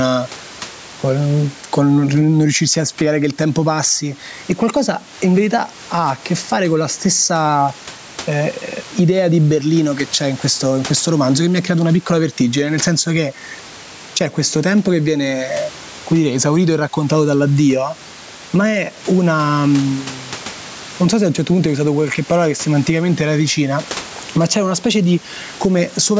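Gain pumping runs through the whole clip, with the gain swinging by about 10 dB. The likely cause is input gain set far too high, with a fast limiter clamping each peak. The room noise sits about 30 dB below the speech.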